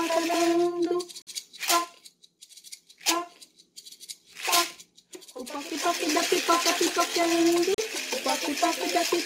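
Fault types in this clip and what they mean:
Bluetooth stall: the sound drops to complete silence twice, for about 51 ms from 1.22 s and about 37 ms from 7.74 s, then carries on. The likely cause is radio interference delaying packets, so the headphones' buffer emptied before the resent data arrived. On a waveform each gap is a flat, near-silent line between normal signal. On a spectrogram it is a thin vertical strip empty at every frequency, with sharp edges.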